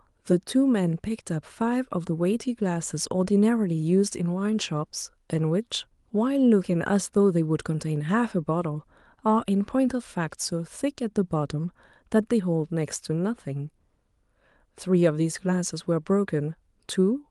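No technical faults can be heard in the speech, which carries the ordinary sound of a call path, with a top end that stops at about 12 kHz, consistent with an Opus call codec at a moderate bitrate.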